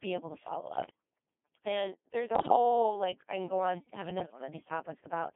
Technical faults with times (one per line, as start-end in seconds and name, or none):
0.00-5.36 Codec 2 vocoder
0.75-0.89 bit errors on digital voice radio
2.35-2.55 bit errors on digital voice radio
4.17-4.47 bit errors on digital voice radio